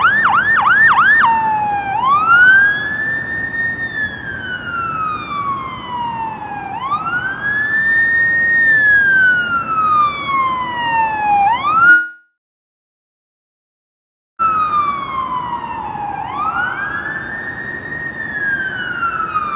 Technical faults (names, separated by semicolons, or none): long network dropout